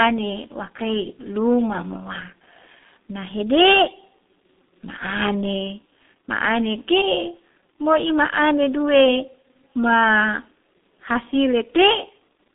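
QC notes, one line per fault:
Throughout, G.723.1 codec: the speech is muffled and hoarse, with consonants smeared together, which fits heavy coding at about 6.3 kbit/s. The line band runs from about 200 Hz to 3.7 kHz and nothing is present above 3.8 kHz, so sibilants and breath detail are gone. The codec rebuilds the voice from a coarse model refreshed only every 30 ms frame, so quick changes in the speech blur and the harmonic texture turns rough.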